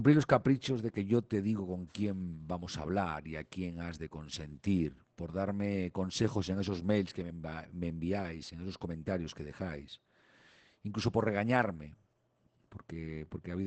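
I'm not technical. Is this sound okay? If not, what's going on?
No. Throughout the speech, the sound has been squeezed by Opus voice compression set to a very small data budget. To save space, the coder models speech as a simple buzzing source shaped by the mouth, rebuilt in small slices every 20 milliseconds, and it throws away fine detail. You hear this as a muffled, hoarse, faintly robotic quality from start to finish, with the crisp upper part of the sound missing.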